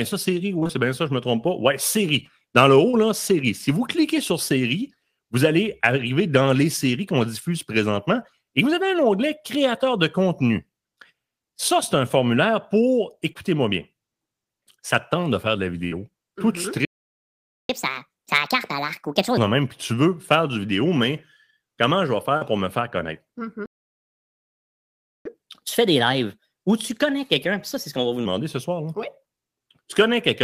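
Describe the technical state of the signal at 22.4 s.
At 22.37 to 22.43 s there is short concealed packet loss. About 40 ms of the speech arrived too late for the decoder, which bridged the gap by extending the preceding sound and then blending back in. The result is a brief smear or wobble.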